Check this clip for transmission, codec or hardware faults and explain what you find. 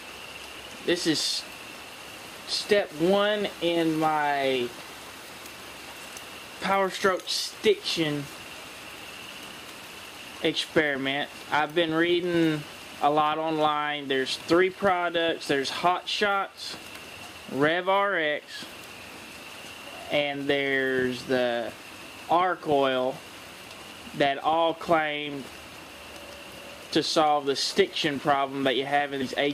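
One transmission fault is audible, near the very end of the clip.

Compressed frames skipped at 29.21 s: a short run of encoded frames never reaches playback, so the audio leaps ahead by around 70 ms, consistent with about seven 10 ms frames dropped. It is heard as a sudden jump forward at the join.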